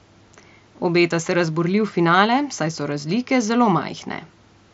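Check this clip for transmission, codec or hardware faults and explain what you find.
No faults found in this speech clip.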